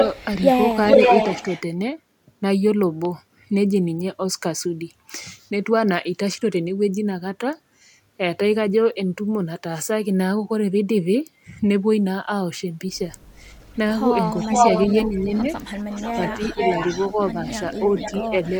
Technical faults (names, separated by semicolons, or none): echo leak; speech suppressed in double talk